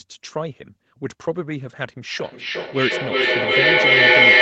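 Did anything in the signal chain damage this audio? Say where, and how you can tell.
Yes. From 2.2 s to the end there is feedback echo between two devices: a nearby device replays the call, its microphone resends it, and neither echo canceller catches the loop. Ringing repeats roughly every 400 ms pile up to about 13 dB above the speech.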